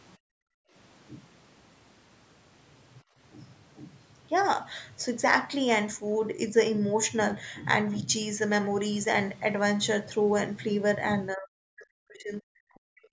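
From 0.17 to 0.75 s, the room tone behind the speech is background gated by the echo canceller. While the far-end loudspeaker plays, the canceller clamps the microphone down by about 40 dB, so the ambience vanishes for roughly half a second and then floats back. A second, shallower dip of about 21 dB follows from 3.03 to 3.18 s and lasts a little over a tenth of a second. On a waveform, the low noise floor pinches to near-silence. A spectrogram shows the faint broadband background turning dark across all bands for those spans.

From 11.32 to 13.09 s, the talker is pulled down hard and unevenly. The level falls by something like 40 dB at its deepest, and the voice breaks into choppy, muffled fragments totalling about one and a half seconds. This is likely speech suppressed in double talk: with both ends speaking at once, the canceller cannot tell the local voice from loudspeaker echo and attenuates everything. 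The waveform shows the speech envelope chopped into gapped pieces. On a spectrogram, the harmonics thin out and drop away in patches. The whole band is already capped at 8 kHz, as expected from call microphone processing.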